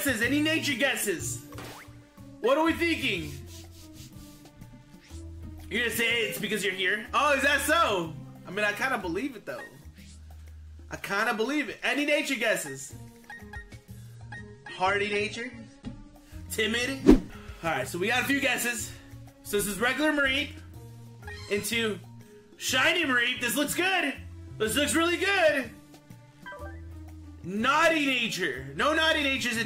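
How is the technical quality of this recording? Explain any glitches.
One glitch stands out: an adaptive stream at a lower bitrate, from 14.15 s to 16.15 s. For those two seconds the player switched to a cheaper version of the stream, likely because the connection slowed, then switched back. The quality drops at once with no gap: the top end vanishes above about 9.7 kHz and coding artefacts thicken. That dullness fits a step from around 96 kbit/s AAC down to roughly 32 kbit/s.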